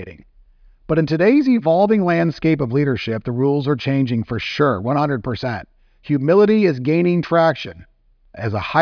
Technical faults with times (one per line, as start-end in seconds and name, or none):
none